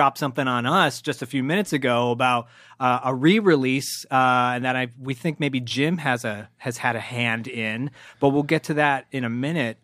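No technical faults can be heard anywhere in the recording.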